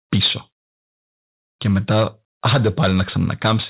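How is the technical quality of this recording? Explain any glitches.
The recording is marred by distortion at the start and end of the speech, with two small level drops.

Microphone overload at 0.12–0.33 s and 2.45–3.70 s: the input likely ran about 7 dB too hot, flattening peaks (around a tenth of samples early, a few percent later) into harsh crackle.

Microphone volume stepped down at 0.24 s and 3.64 s: the call software likely reacted to that clipping by cutting input gain by 2 dB at once, so voice and background abruptly dip.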